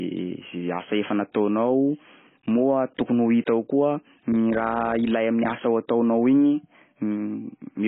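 Speech runs throughout with AAC compression damage, likely from AAC-LC at around 16 kbps: nothing above 3.8 kHz, a dull, smeared tone, and warbling on sustained sounds and sibilants. A plain low-pass filter would dull the sound without that shifting, fizzy texture.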